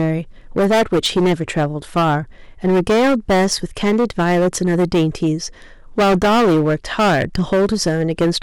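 Hard clipping runs through the whole speech clip. The signal is driven about 15 dB past what the stage can pass, so around a sixth of the samples are cut flat at the ceiling. Those squared-off peaks add high harmonics, giving a harsh fuzz on every loud syllable.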